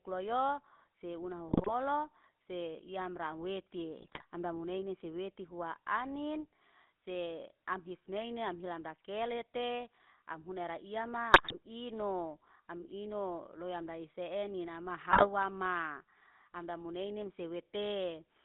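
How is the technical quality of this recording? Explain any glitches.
The technical quality is poor: the speech passes through a low-bitrate mobile codec and suffers four bursts of corrupted decoding.

GSM full-rate codec, throughout: the speech is coded by a vocal-tract model driven by sparse pulses, which fits GSM full rate at 13 kbps. It leaves a buzzy, gravelly texture and a narrow 200 Hz to 3.6 kHz band.

GSM bit errors, at 1.48 to 1.71 s, 4.01 to 4.23 s, 11.32 to 11.55 s, and 15.10 to 15.28 s just after "eni nama": flipped bits corrupt the decoder's filter, pitch and gain values, which points to a few percent of bits in error. These bursts cause squawks, pops and gargling.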